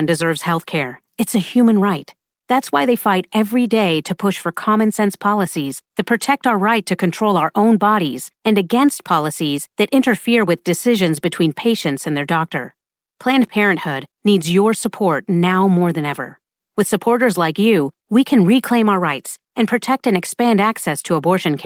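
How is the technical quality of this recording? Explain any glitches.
The recording has no glitches, and the speech comes through continuously with full bandwidth over Opus voice compression, which leaves only a light trace of coding on the sound.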